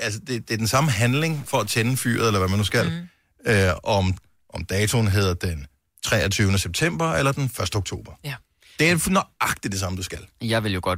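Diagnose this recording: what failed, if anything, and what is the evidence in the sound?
From 0.81 s to 2.71 s the speech turns harsh and buzzy, and the pauses fill with noise. The likely cause is a stuck bit at the converter. One fixed bit shifts about half the samples by a step of around -40 dBFS.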